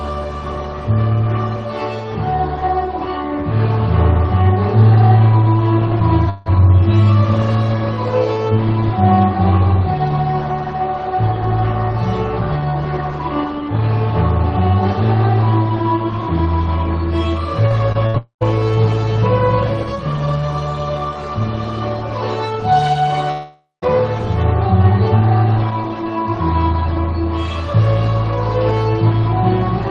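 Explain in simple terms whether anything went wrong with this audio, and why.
Several gaps interrupt the audio, all from the sound travelling over a call connection that lost pieces along the way.

At 6.29 to 6.50 s, 18.18 to 18.43 s and 23.32 to 23.84 s, the sound is stretched out as a fading buzz or hiss. In the later two, it then drops to near silence before resuming. This is likely a long network dropout. It is set apart by its length, roughly a fifth of a second, a quarter of a second and half a second of lost audio, and by that dead stretch.

At 17.68 s and 17.92 s there are tiny smears, each covering about 20 ms of missing sound. This is short concealed packet loss: the receiver patched over a small hole by continuing the last sound. Unlike a dropout, it is so brief it sounds like a wobble rather than a gap.

From 18.07 to 18.16 s, about 80 ms goes missing. This is a burst of packet loss: the last sound is held as a buzz or hiss that fades down, then the audio jumps ahead. 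It is longer than the smears but never reaches the silence of a dropout.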